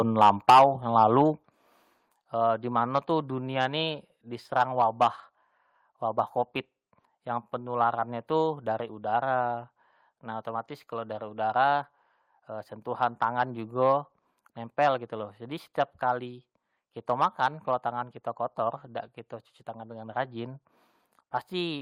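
From 0.21 to 0.65 s the loudest syllables of the speech carry a harsh, crackling edge. This is microphone overload, likely from an input level set too high, so peaks ran about 7 dB past the converter's limit and roughly a tenth of the samples were flattened. On a waveform the peaks show as squared-off plateaus. A spectrogram shows broadband smearing up through several kHz on each clipped burst.

At 0.5 s, partway through that distorted stretch, the voice and the background both drop by about 4 dB at once. At 1.5 s there is a second, larger drop of about 6 dB. Both are the microphone volume being stepped down, likely by the call software reacting to the clipping and lowering the device's input gain. The waveform envelope shrinks abruptly at each point instead of fading. On a spectrogram the whole frequency range, noise floor included, darkens in a clean vertical line.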